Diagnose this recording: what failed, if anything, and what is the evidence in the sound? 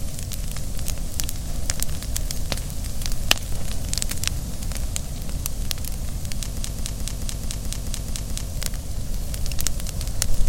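A broken-record loop runs from 6.58 to 8.48 s in this everyday-sound recording. A 216 ms fragment repeats exactly, back to back, nine times. The cause is likely a stall in the player, encoder or stream, which kept resending its last held fragment. The audio due in that span is lost.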